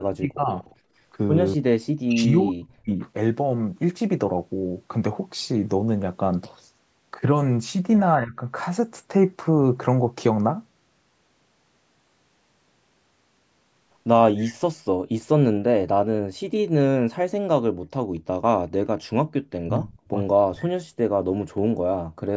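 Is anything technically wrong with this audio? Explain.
Yes. The speech shows three kinds of echo-canceller fault.

Speech suppressed in double talk occurs four times: 0.0–0.52 s (down roughly 30 dB), 1.57–3.0 s (roughly 40 dB at its deepest, with about a second affected), 8.2–8.34 s (a shallower dip of roughly 15 dB) and 19.64–20.64 s (roughly 35 dB). The voice sinks or breaks up in pieces. The likely cause is the canceller mistaking near-end speech for loudspeaker echo while both ends talked, and attenuating everything.

An echo leak appears at 0.62–0.75 s as a faint, delayed copy of the voice trailing about 239 ms behind, sitting roughly 35 dB below the speech. This is likely residual echo: a far-end device playing the call over a loudspeaker left part of its microphone pickup uncancelled and sent it back down the line, so the talker hears a ghost of themselves.

Background gated by the echo canceller happens at 0.8–0.93 s, where the room sound drops by about 14 dB, and at 21.55–21.73 s, a much harder cut of about 32 dB. 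Each lasts well under a quarter second. The canceller clamped the microphone while the loudspeaker was active, and the ambience returns once it releases.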